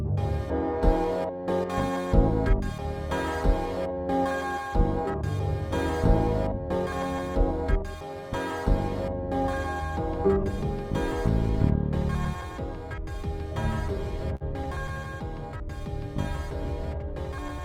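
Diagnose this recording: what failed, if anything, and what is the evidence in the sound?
The network dropped a burst of packets at 14.35 s, running to about 14.43 s. The receiver stretched the last bit of sound for roughly 50 ms, fading it down as it went, then picked up again with about 40 ms simply missing.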